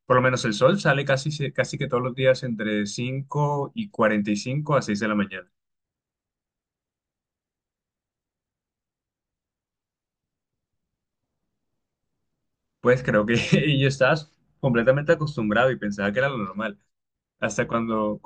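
Listening through the recording, nothing stood out as a technical problem at any point.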